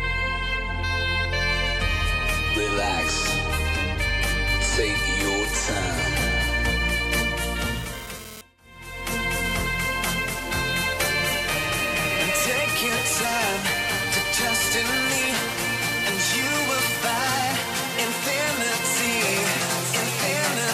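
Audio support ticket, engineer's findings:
GSM phone buzz, 7.59 to 9.55 s. 2G handset near the audio path, transmitting in bursts at about 217 Hz; input stage rectifying the RF pulses into the signal. Result: hard, raspy 217 Hz buzz with dense harmonics, unrelated to the programme, about 17 dB below signal. Intermittent rather than steady, pointing to a data transfer, not a call. Probable component: audio input stage.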